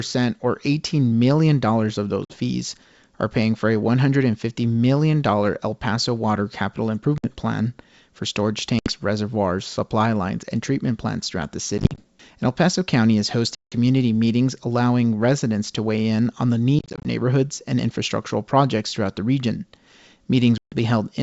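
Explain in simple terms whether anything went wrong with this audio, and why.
Short, sharp gaps of silence cut into the speech at 2.25, 7.18, 8.79, 11.78, 13.55, 16.79 and 20.58 seconds; around 11.78 and 16.79 the gaps come in scattered bursts. After each hole, the sound briefly returns rough or at the wrong loudness. This is packet loss on an ADPCM call: missing chunks were replaced by silence, and the receiving decoder briefly lost step with the sender before settling again.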